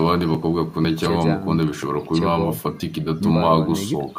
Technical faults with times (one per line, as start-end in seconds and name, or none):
1.63 bit error spike